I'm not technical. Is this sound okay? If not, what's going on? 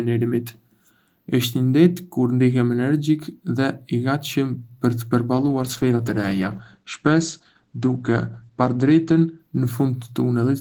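No. From about 5.33 s to 10.29 s the speech turns muffled and rough, losing its crisp top end, worst for about 3.6 seconds. This is a call bitrate drop: the connection weakened, so the call squeezed the sound into far less data.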